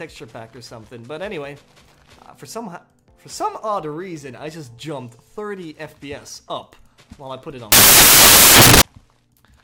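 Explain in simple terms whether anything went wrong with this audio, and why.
Something went wrong from 7.72 to 8.82 s. The audio turns into a burst of loud, harsh noise. This is samples built from the wrong bytes. The player stitched each sample's bytes together wrongly, so tiny fast-changing details became huge jumps.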